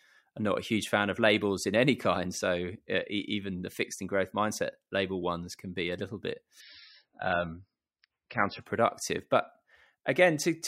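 Right after "be a little bit", at 6.60 s, the quality suddenly drops with no gap: the adaptive stream has fallen back to a lower bitrate, which fits moving from about 128 to 16 kbit/s MP3. Codec artefacts rise and nothing remains above 5.6 kHz until it recovers at 8.60 s.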